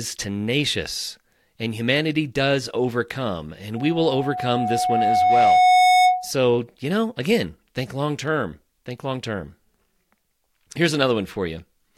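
Loudspeaker feedback squeal runs from 3.76 s to 6.31 s in this speech clip, starting just after "and humanity does overcome" and gone by "you know again think". A single tone near 732 Hz swells over roughly two seconds until it sits around 10 dB above the speech. The microphone is hearing the loudspeaker it drives, and at that one frequency the loop gain has passed unity, so the tone keeps feeding itself until the loop is broken.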